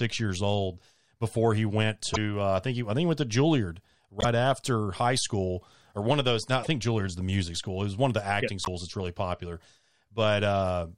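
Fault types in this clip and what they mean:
broken MP3 bit reservoir: frames were likely cut from the MP3 stream, so later frames fetched their borrowed data from the wrong bytes. The speech jumps ahead with a garbled glitch of 40 to 50 ms, about two 26.1 ms frames.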